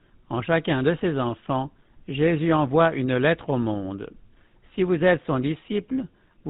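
Throughout the recording the speech has a buzzy, gravelly roughness, and it sounds muffled, with nothing above 4 kHz. These are the marks of the GSM full-rate codec, and the damage is plainly audible. It rebuilds each voice from a vocal-tract model excited by evenly spaced pulses, keeping only every third excitation sample. That coarse excitation causes the grainy buzz. The overall character fits the 13 kbps rate of the original GSM speech codec.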